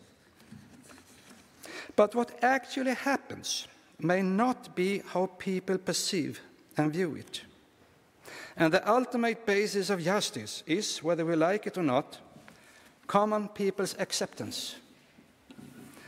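Dropped samples, at 8.76 s and 10.96 s: two sharp single clicks, each likely caused by a tiny fraction of a millisecond of missing samples that makes the waveform jump abruptly.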